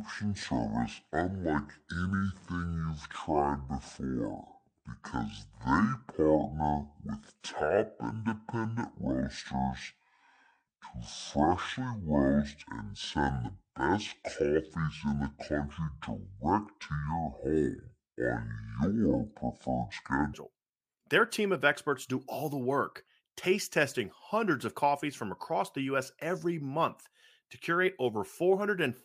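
From 0 to 20.34 s there's a section at the wrong speed. It runs at 0.562x and about ten semitones down, so it sounds deep and slow, likely from a mismatched clock.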